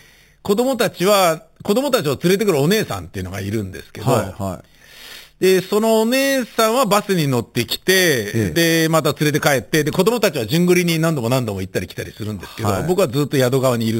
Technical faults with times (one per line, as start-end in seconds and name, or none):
0.00-13.99 imaging from sample-and-hold upsampling